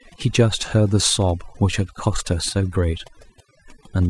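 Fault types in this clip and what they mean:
overdone noise removal: a noise reduction process applied far too aggressively to a noisy speech recording, running for the whole clip. Any frequency band that sits close to the tool's noise estimate is pulled down hard or gated off entirely, and the quieter components of the speech are caught along with the noise. Between phrases the background drops, broken by twinkling, chirpy specks where isolated bands flicker on and off.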